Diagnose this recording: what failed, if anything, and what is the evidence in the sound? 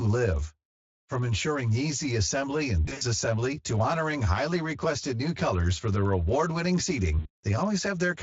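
Channel delay (comb filtering) at the buffer stage: one channel runs about 10 ms late, and the mono sum notches roughly every 100 Hz, starting near 50 Hz. Speech sounds hollow throughout.

VoIP packet loss concealed by the speech codec, network stage: at 2.85–3.03 s and 7.19–7.45 s, speech stretches into a buzzy tone or coloured noise that fades while the decoder extrapolates.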